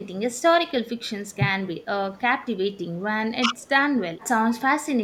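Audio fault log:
1.06–1.15 s and 3.40–3.52 s, speech suppressed in double talk. The speech dips briefly, by about 15 dB and then about 10 dB, each for roughly a tenth of a second. Both sides likely talked at once, so the echo canceller ducked this talker with the echo.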